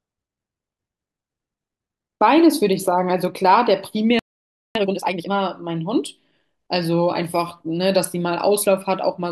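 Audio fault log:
4.19–4.75 s, playback stall: the speech cuts out abruptly in mid-flow and the output stays silent for about 0.56 s before sound returns. The break is a dead gap. The likely cause is the player running short of buffered data, or its audio thread being blocked for that half-second, so nothing reached the output until it recovered. The speech then resumes from the point where it stopped.
4.75–5.31 s, time-compressed catch-up: straight after the gap the speech comes out hurried, running at twice normal speed for about 0.56 s while its pitch stays where it was. The player is working off the backlog built up during the stall by cutting out short slices and cross-fading across the joins, giving this stretch its rushed pace until playback returns to real time.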